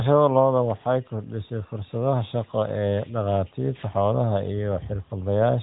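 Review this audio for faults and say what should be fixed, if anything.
Nothing here needs fixing: the speech comes across the narrowband mobile link exactly as that kind of link should, so there's nothing to chase down or prevent.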